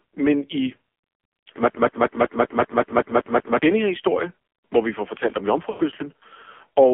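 Throughout, the speech carries heavy AMR narrowband mobile codec damage. It is buzzy, synthetic and confined to roughly 250 Hz to 3.4 kHz, which fits AMR-NB at a low rate around 5.9 kbps. On a spectrogram, the energy stops sharply at 3.4 kHz, with nothing visible above it.

From 1.70 to 3.62 s, a broken-record loop repeats a 0.19 s fragment ten times back to back, and the audio meant for that stretch is lost. The likely cause is a stalled player or stream resending its last buffer. On the waveform, identical blocks tile evenly before the speech resumes at "denne her historie hvor".

From 5.70 to 5.82 s, just after "vi får fortalt om", lost AMR speech frames leave a 0.1 s gap, which fits five dropped 20 ms frames. The decoder stretched the last good sound and faded it out, so the waveform tapers toward silence and the spectrogram shows a smeared, dimming band.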